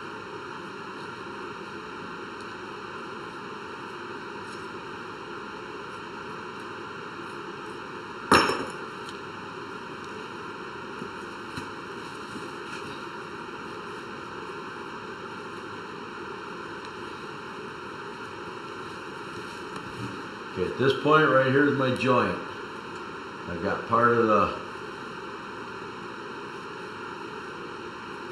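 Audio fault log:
throughout, channel delay (comb filtering): one channel arrives late by about 0.7 ms, and the two channels are then summed to mono, so the components they share cancel at evenly spaced frequencies. The first notch sits around 700 Hz, and further notches repeat roughly every 1.4 kHz, near 2 kHz, 3.5 kHz and upward. Those fixed gaps leave the sound hollow and phasey in every part of the clip.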